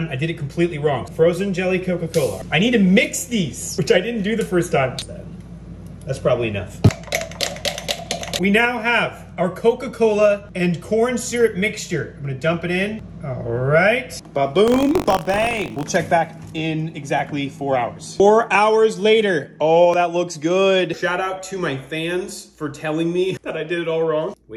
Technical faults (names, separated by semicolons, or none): DAB burbling; buffer tearing